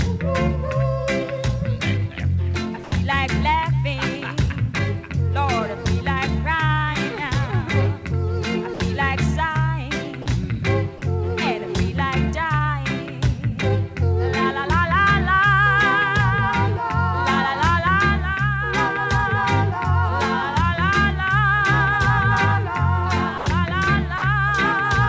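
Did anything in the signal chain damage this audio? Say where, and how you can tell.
Yes, short gaps filled with flat comfort noise at 2.84, 8.74, 10.22, 10.98, 23.38 and 24.18 s, each 40 to 80 ms. That's likely sound dropped by the voice detector during call processing.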